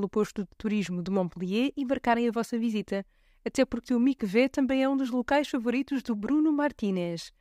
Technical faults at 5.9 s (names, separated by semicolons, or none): none